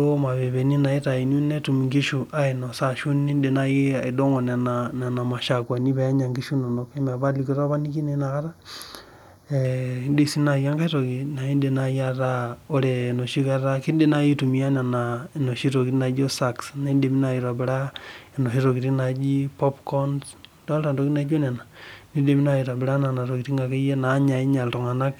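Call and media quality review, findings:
Channel delay (comb filtering), 5.63 to 9.65 s: speech goes hollow and phasey. One channel's running a fraction of a millisecond late before the mono sum, so notches land evenly from around 3 kHz up. Check the stereo-to-mono downmix path.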